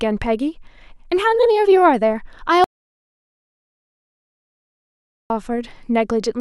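At 2.64 s the speech cuts off abruptly. This is an audio dropout to silence. From there until 5.30 s the signal is silent, with no room tone or hiss. Speech then resumes mid-flow. About 2.66 s of material is simply missing. The likely cause is the input being lost, through a disconnected device, a broken link or a stray mute, while recording carried on writing silence.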